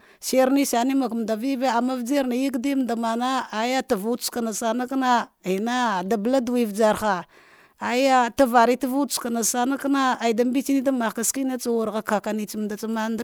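No technical faults can be heard anywhere in this recording.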